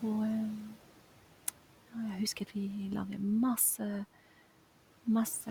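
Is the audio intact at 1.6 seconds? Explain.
No. At 1.6 seconds, as throughout the clip, the room's background noise dips between phrases and swells back under the speech. These are noise suppressor artifacts: the suppressor cuts what it judges steady noise band by band, frame by frame, by about 12 dB.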